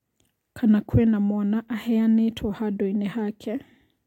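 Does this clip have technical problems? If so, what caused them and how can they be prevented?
No, this clip has no technical problems, so there is nothing to trace to a cause or prevent.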